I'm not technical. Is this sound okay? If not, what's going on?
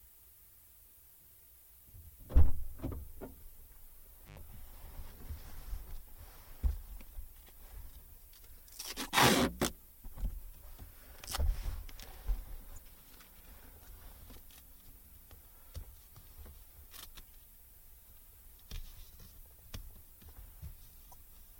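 No. There are two kinds of problem in these sounds.

Five times the audio hiccups for a split second, a quick glitch such as a chirp, click or brief gap: at 3.38, 9.05, 12.74, 15.11 and 21.10 seconds. Each lasts only a few hundredths of a second. This is damaged data in a compressed stream: part of the stored file got scrambled, so the player briefly lost its place and had to hunt for the next good chunk before carrying on.

Around 4.26 to 4.39 seconds the sound cuts out for roughly a twelfth of a second, with crackling on either side of the gap. That points to an intermittent contact, a loose cable or plug that lost its connection for a moment and then snapped back.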